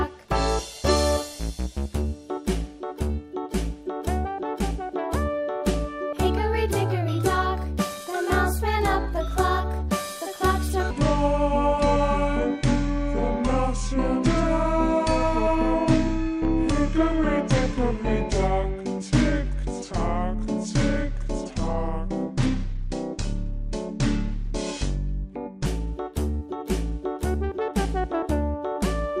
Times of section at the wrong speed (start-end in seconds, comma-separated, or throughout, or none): 10.91-25.66